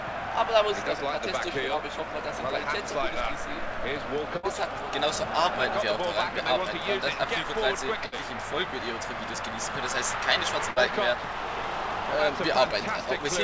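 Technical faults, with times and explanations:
4.37–4.46 s, 8.06–8.15 s and 10.71–10.79 s, burst of packet loss: each time about 60 ms of audio never arrived, so the receiver stretched the last sound for 54 to 61 ms while fading it down, then skipped ahead past the lost chunk.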